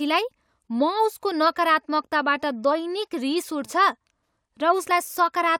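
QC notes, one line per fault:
No faults detected across the speech clip; no dropouts, clipping, level jumps or timing breaks were heard.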